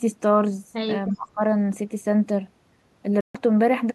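From 1.11 to 1.41 s the speech dips sharply, by roughly 25 dB. This is likely speech suppressed in double talk: an echo canceller mistook overlapping talk for echo and turned it down.

From 3.21 to 3.36 s the sound cuts to silence, then resumes further on. A Bluetooth dropout is the likely cause. The gap of about 139 ms fits roughly six lost frames.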